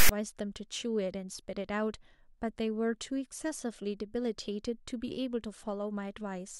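File tags played as audio, from 0.00 to 0.09 s: a text tag block decoded as samples produces a loud, lopsided rasp with abrupt edges at the very start of the clip.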